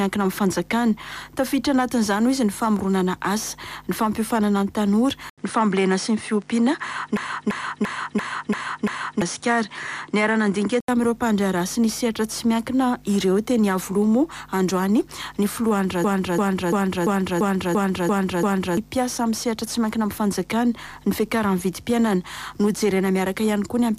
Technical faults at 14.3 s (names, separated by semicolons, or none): none